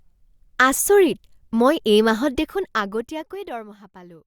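From 2.32 s to 3.8 s, zipper noise rides on the speech. The level is being pulled down by roughly 20 dB. It drops in coarse 2 dB steps instead of one continuous ramp. There are about seven steps each second. Each jump lands abruptly and leaves a small click. Together the clicks form a quick ticking that follows the fade.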